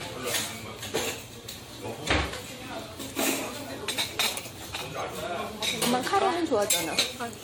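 Across the whole recording of everyday sounds there is a swirly, smeared quality with a hollow, scooped-out tone, and transients land soft and blurred rather than crisp, more degraded than a single encode at this quality would leave it. The likely cause is generation loss: repeated decoding and re-encoding, around seven passes, at settings that fit AAC-LC at 96 kbit/s, with nothing above 20 kHz. Each pass quantises on a shifted frame grid, so noise and spectral gaps keep accumulating.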